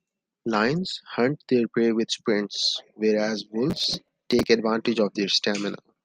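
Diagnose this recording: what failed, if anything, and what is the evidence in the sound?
Processor overload crackle at the driver/buffer stage, 3.7 to 4.47 s: gritty tearing over the speech. About twenty buffers of roughly 5 ms each missed their deadlines and replayed stale audio. These dense, hard-edged repeats are much shorter than the silent gaps of network loss.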